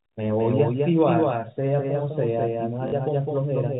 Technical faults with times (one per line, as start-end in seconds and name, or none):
0.00-3.79 doubled audio track
2.88-2.92 packet loss with last packet repeated